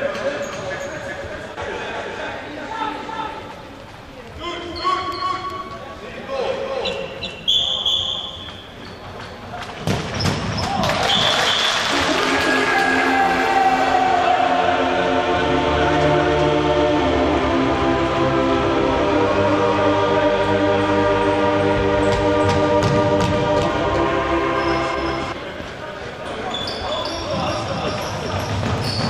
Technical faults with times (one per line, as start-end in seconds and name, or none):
0.00-29.09 doubled audio track